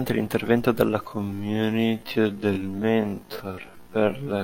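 Software likely stretched the speech from 1.05 s to the end to fill a longer slot, slowing it to about half speed while holding pitch by repeating short pieces, so this time-stretched section drags abruptly at unchanged pitch.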